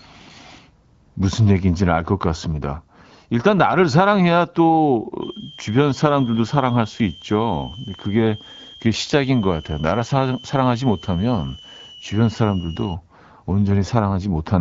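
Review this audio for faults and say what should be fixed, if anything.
A switching supply whistle runs from 5.22 to 12.94 s, a high tone around 3 kHz, roughly 20 dB below the speech, wandering between 2.85 and 3.3 kHz as the supply's burst-mode switching shifts with load. That drifting pitch distinguishes it from a fixed test tone or from feedback, which would lock to one frequency and swell. Powering the recording chain from a linear or well-filtered supply, and keeping switch-mode adapters away from the microphone circuitry, would prevent it.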